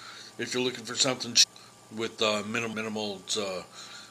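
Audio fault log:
1.42–1.44 s and 2.72–2.74 s: damaged data in a compressed stream. Corrupted bytes make the decoder misread frames and lose sync, causing brief glitches.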